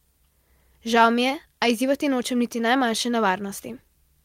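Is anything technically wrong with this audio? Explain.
No, nothing is technically wrong with this speech clip. There is nothing here to flag or explain.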